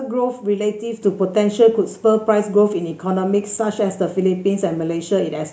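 A microphone volume step-up occurs at 1.02 s, where the input gain of the microphone was raised in a single jump of about 7 dB. The speech and the background noise beneath it both become louder at once and stay at that higher level afterwards.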